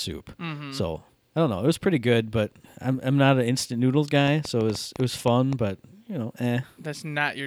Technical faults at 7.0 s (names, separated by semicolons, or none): none